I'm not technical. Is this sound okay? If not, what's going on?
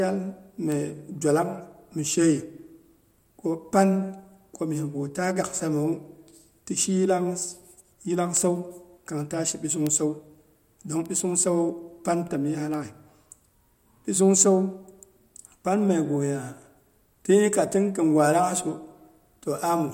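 No. Somewhere in the digital chain, a single stored number in the audio data got corrupted, one binary digit flipping the wrong way. That is a bit error spike: for one instant the recording jumps to a wrong value and then snaps straight back. In the speech you hear it as a sharp tick that has nothing to do with the talking. It happens five times: at 0.72, 8.37, 9.87, 11.06 and 12.74 seconds.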